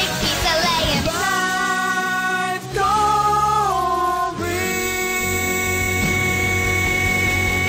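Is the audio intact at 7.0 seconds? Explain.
Yes, the audio is intact at 7.0 seconds, with no dropout, glitch or other fault at that moment.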